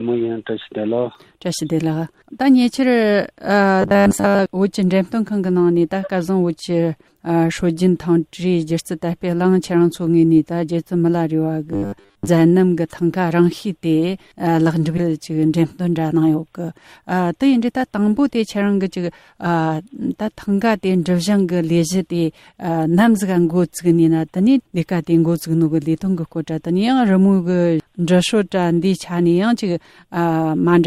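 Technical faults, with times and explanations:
3.82 to 4.39 s and 11.72 to 12.28 s, robotic sound from repeated short buffers: both stretches turn rigid and metallic, with a fixed buzz at 100 Hz. The likely cause is a roughly 10 ms piece of audio being replayed over and over while fresh audio arrives too slowly, so most of each stretch is repetition.
14.97 to 14.99 s, skip ahead: playback jumps forward with no fill at the join. Roughly 0.7 s of audio is lost, most likely dropped in transit or discarded from an overfull buffer while later audio waited, so the two sides butt straight together.
15.07 to 16.36 s, jitter buffer speed-up: the audio runs about 7% fast at unchanged pitch and sounds slightly hurried. The receiver trims tiny pitch-period slices again and again, around a tenth of a second in total, to bring its buffer back down to target.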